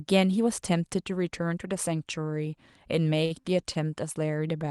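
Three short stalls from a late packet fall close together, at 3.25–3.32 s, 3.40–3.45 s and 3.73–3.77 s. Each time, the jitter buffer ran dry and the receiver held the last sound for about 49, 31 and 19 ms, then resumed from the same place. The speech briefly drags with a faint buzz or dip, but nothing is skipped. That is what separates it from a lost packet, which would leave a gap or smeared replacement.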